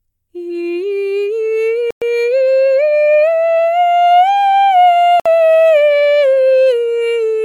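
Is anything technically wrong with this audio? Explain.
Yes, the music cuts to silence twice, from 1.91 to 2.02 s (about 111 ms) and from 5.20 to 5.26 s (about 58 ms). It's likely a Bluetooth stall: interference held packets up, the headphones' buffer ran dry, and playback paused until the resent packets arrived.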